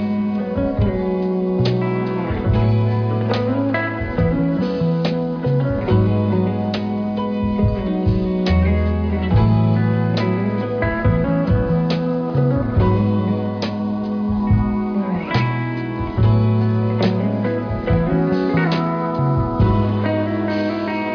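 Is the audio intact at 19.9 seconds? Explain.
Yes, at 19.9 seconds the audio is intact, with no dropout, click, distortion or other fault at that point.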